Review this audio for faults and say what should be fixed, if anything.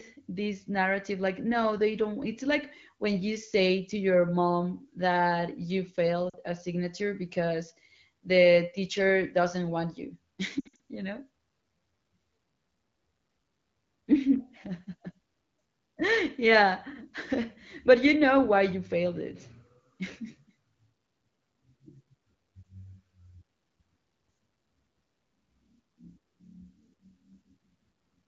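Lost AMR speech frames appear at 6.30–6.36 s, a 40 ms dip after "your mom that you", and at 10.59–10.76 s, after "teacher doesn't want you", where scattered losses over about 200 ms (longest run 60 ms) cause a smeared, fading warble. Each time the decoder repeats the last good pitch and vocal-tract settings at falling gain, so the sound stretches and fades rather than cutting to hard silence or clicking like a digital dropout. Stronger radio error protection or a more robust link would prevent it.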